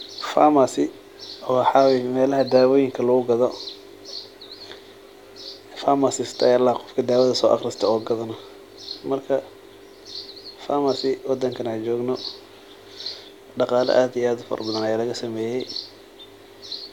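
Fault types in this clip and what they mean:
No fault types are present in this clip.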